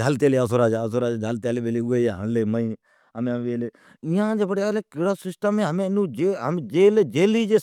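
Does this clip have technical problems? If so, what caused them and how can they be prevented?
No, nothing in this speech clip stands out as a technical problem, so there's nothing to trace back or guard against here.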